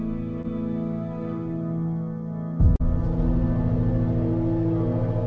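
At 0.42–0.46 s and again at 2.76–2.82 s, short concealed packet loss leaves a brief smear where roughly 20 ms, then 40 ms, of audio arrived too late. The receiver extended the preceding sound to bridge each gap before blending back in. The band-limit at 8 kHz fits a G.722 call path.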